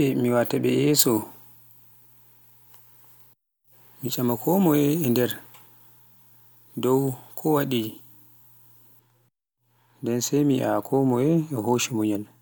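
A speech recording with pre-emphasis left on from 0.99 s to 8.99 s: the treble lift applied before transmission, which fits a 50 µs FM curve, was never undone, leaving about 10 dB extra at 10 kHz relative to 1 kHz, so the sound turns thin, bright and sibilant.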